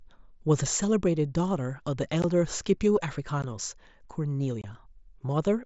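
Unconcealed Bluetooth headset packet loss drops brief stretches of the wideband mSBC link with nothing filling them, leaving abrupt gaps in the speech: about 15 ms at 2.22 s and 3.42 s, then about 22.5 ms from 4.62 to 4.64 s.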